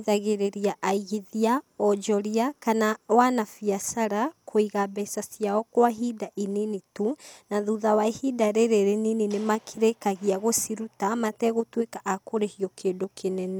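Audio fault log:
Listening through the speech, nothing stood out as a technical problem at any point.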